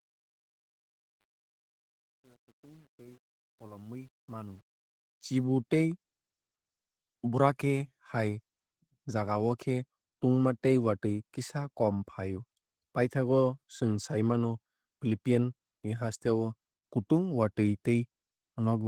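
From the start to 5.44 s, the speech fades in gritty, worst up to about 4.58 s. This is truncation distortion on a fade: the fade-in stage kept only 9 bits with no dither, so quiet passages collapse into coarse square steps.

Throughout the clip, the speech sounds muffled, hoarse and slightly robotic. This is Opus voice compression in hybrid mode, which fits a bitrate around 16 kbps. The excitation is coded too coarsely for clean speech, so the codec damage is plainly audible.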